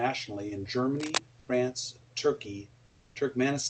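From 0.97 to 1.18 s there's a burst of cable scratch noise, a dense, ragged crackle roughly as loud as the speech itself. It's likely a worn cable or connector being moved, its contact resistance jumping around and spraying noise over the signal for that fifth of a second.

Then comes comfort noise in place of the background, twice: briefly from 1.39 to 1.47 s, and for about 300 ms from 2.85 to 3.15 s. The real room noise gets swapped for flat, featureless hiss, about 3 dB quieter the first time and about 6 dB the second. That's likely the sender's discontinuous transmission kicking in during pauses, which fits Opus DTX, with the receiver padding the gap with synthetic noise.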